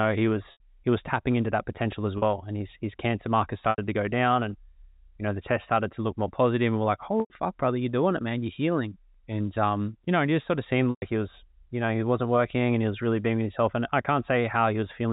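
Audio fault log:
0.52, 2.18, 3.70, 7.20 and 10.90 s: packet loss with pitch repetition. Gaps of 80, 40, 80, 100 and 120 ms went missing from the stream, sizes that fit losses of whole 20 ms packets. The receiver filled each hole by looping the last pitch period and fading it over about 50 ms. The 40 ms gap sounds like a briefly held, buzzy tone. The longer ones trail into silence before speech returns through a short cross-fade, all within the 4 kHz telephone band of the G.711 line.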